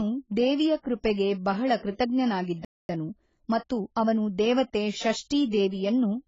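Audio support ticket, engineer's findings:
Dull, band-limited sound throughout. Sibilants smeared and fizzy, with a warbling texture on held sounds. Heavy coding damage. Likely AAC compression, AAC-LC at a low bitrate, which fits about 16 kbps. At that rate the encoder pulls its cut-off down and leaves holes in the spectrum. It spends its few bits only on what the hearing model rates most audible.

Pre-echo at 1.13 to 1.18 s. A short hiss runs about 43 ms ahead of a sharp onset, and the attack sounds softened. Same transform codec. The onset sits late in a coding block, so quantisation noise sized for the loud part spreads back into the quiet stretch before it.

Playback stall at 2.65 s. Output drops to silence mid-flow for 242 ms and resumes at 2.89 s. Likely cause is the player running out of buffered data, or its audio thread being blocked. The sound simply halts, then continues.

Time-compressed catch-up from 2.89 to 4.49 s, right after the stall. 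The audio is hurried, running 1.15 times faster, at normal pitch. The player is cutting its backlog by dropping small pieces and cross-fading the joins. That recovers the 242 ms lost to the gap without a pitch shift.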